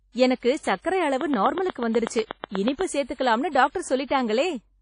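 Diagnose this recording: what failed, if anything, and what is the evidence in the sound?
Codec stage: the whole clip is ringing and washy, with hiss that breathes with the speech and nothing above 10.1 kHz. The damage is plainly audible. This is likely WMA compression, consistent with a low bitrate near 32 kbps, with long transform blocks smearing quantisation noise.

Analogue wiring or power: from 1.21 to 2.82 s a regular train of clicks ticks over the speech at about 8.1 per second. There are around fifteen similar pulses, standing roughly 15 dB above the signal. The likely cause is interference from nearby equipment or a faulty connection or supply.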